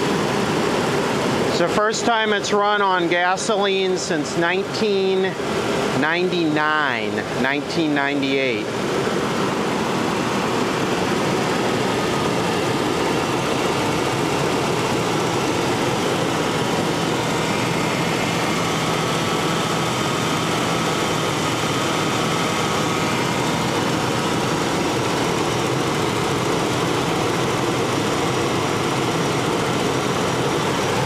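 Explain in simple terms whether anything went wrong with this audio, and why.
At 3.79 s there's a single sharp click, likely from dropped samples: a handful of samples went missing, so the waveform suddenly jumps.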